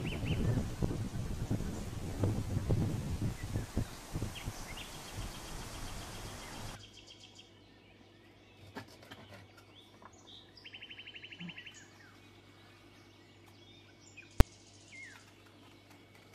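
The audio has one fault: invalid numbers at full scale, heard as a single loud bang at about 14.40 s. A calculation there produced infinite or invalid values, which were forced to the largest sample value, so the output sits flat at one extreme value, far beyond the audio's peaks, for about 5.8 ms, which fits a 256-sample processing block. Because the block is so short, the pops at its start and end merge into one bang. Ordinary clipping is different: it flattens only the peaks of an overdriven waveform and still follows the sound. Here the signal is replaced by a flat rail for the whole block.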